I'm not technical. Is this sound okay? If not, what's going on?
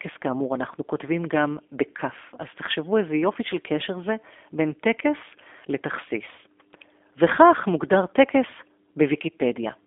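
No, not quite. The speech runs through the G.729 codec the whole way, the kind of squeezing phone and internet calls use to save data. It doesn't send the actual voice; it sends a rough recipe and rebuilds the sound at the other end. That's why it comes across slightly rough and synthetic, like a cheap phone line. Everything above about 3.7 kHz is gone, and the deep bottom is thin too, so it sounds boxy and a bit dull.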